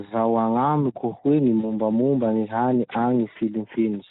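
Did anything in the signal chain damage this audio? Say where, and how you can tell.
Yes. The codec stage is at fault throughout. The speech is plainly hoarse and noisy for the whole clip. This is Speex codec damage. The excitation gets too few bits, which fits a bitrate of about 11 kbps, so fine voice detail becomes rough noise.

The network stage adds VoIP packet loss concealed by the speech codec. It occurs at 1.59 to 1.66 s, just after "agnamiko hoe gny", and at 3.33 to 3.37 s. The decoder stretches the last sound into a fading tone or noise, which fits about 40 ms and then 20 ms of missing frames.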